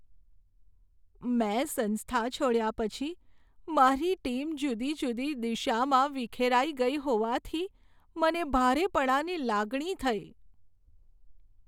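No technical faults can be heard at any point in the recording.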